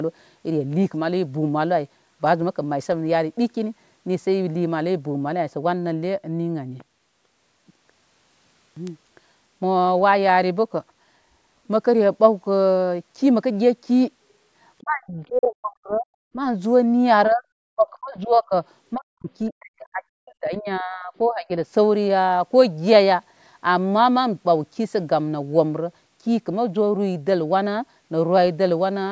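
Speech suppressed in double talk hits this speech recording from 14.8 to 16.07 s, 17.29 to 17.44 s, 17.66 to 18.55 s, 18.94 to 19.3 s and 19.5 to 21.5 s, with the voice dipping steeply, by around 40 dB in the worst stretches and about 25 dB in the short one at 17.3 s. The likely cause is an echo canceller that, with both ends talking at once, mistook the near talker for loudspeaker echo and attenuated it, while the call's microphone processing leaves nothing above 8 kHz.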